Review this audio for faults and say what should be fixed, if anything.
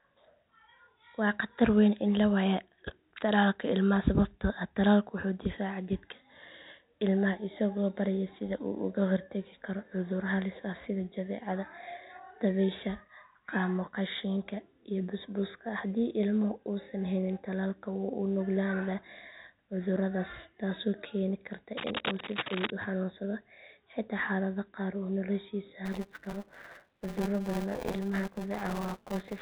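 From 21.76 to 22.70 s, just before "u xanuunsado", cable scratch noise adds dense, irregular broadband bursts about as loud as the speech, likely from a worn cable or connector. On a spectrogram they show as ragged vertical smears. Replace or reseat the cable and connectors, and keep them still while recording.

From 25.85 s to the end, buffer tearing produces a 200 Hz robotic rattle. The writer and reader of the playback buffer cross every period, so roughly a fifth of each buffer repeats audio about 10 ms old. This shows as hard waveform discontinuities every 5 ms and evenly spaced vertical striations on the spectrogram. Fix the buffer pointer synchronisation or enlarge the buffer so the two never overlap.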